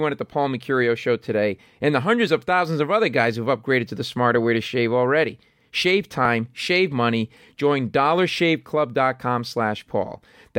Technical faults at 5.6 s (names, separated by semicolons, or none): none